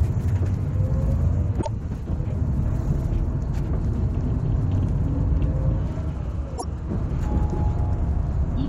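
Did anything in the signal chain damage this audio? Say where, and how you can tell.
Yes, at the codec or storage stage, from damaged data in a compressed stream. Two brief disruptions of about 0.1 s each interrupt the sound, from 1.58 to 1.68 s and from 6.55 to 6.64 s. Corrupted bytes made the decoder misread those frames and lose sync until it found a valid frame header. On a spectrogram each shows as a sharp-edged break, and the waveform shows an abrupt, discontinuous patch.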